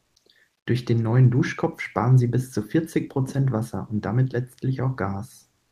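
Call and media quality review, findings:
Comfort noise in place of the background, 0.03 to 0.15 s, about 120 ms. Likely Opus DTX: sender's voice detector flagged no speech at clip start and transmission paused; receiver synthesised noise to fill the gap. Audible result: real background, already about 54 dB below the loudest speech, replaced by smoother synthetic noise, with the level shifting by about 3 dB before actual audio resumes.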